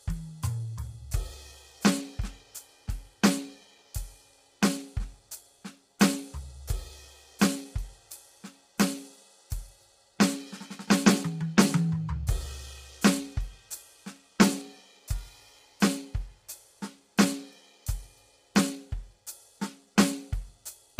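A music recording with low-delay AAC compression damage throughout: tonal parts sound rough and grainy, with noise smeared between harmonics and a dulled, synthetic-sounding top band. The short coding frames likely come from AAC-ELD at a low bitrate, consistent with about 24 kbps.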